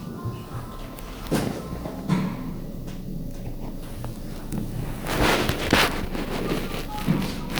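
From 5.40 to 5.81 s, cable scratch noise appears. A rustling, scratchy burst sits about 10 dB below the sound. A worn cable or connector being moved is the likely cause.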